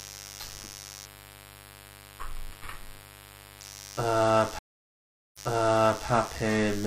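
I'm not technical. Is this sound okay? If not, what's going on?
No. Throughout the clip there is mains buzz: electrical interference from the 50 Hz power supply, probably from a dimmer, power adapter or poorly shielded cable, has leaked into the recording. You hear it as a steady, raspy buzz sitting under everything, fairly loud.

From 1.06 s to 3.61 s there is a channel delay (comb filtering): one of the two stereo channels runs a tiny fraction of a millisecond behind the other, and when they are combined, parts of the sound cancel out. The top end, from roughly 7 kHz up, turns thin and hollow.

At 4.59 s there is a stream reconnect: the connection dropped, and the player went quiet for about three quarters of a second before picking up again. When the sound returns, it restarts about 0.7 s earlier, so you hear a short stretch repeated, settling by about 6.07 s.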